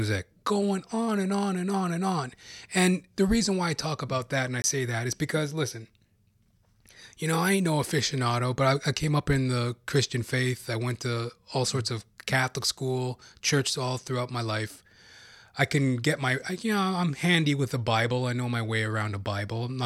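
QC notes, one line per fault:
4.62–4.64 s, block of digital silence: A 20 ms stretch of samples was replaced by zeros, which points to an output buffer not being filled in time. Between "about that and I" and "that is because listen", the speech drops abruptly into a brief hole.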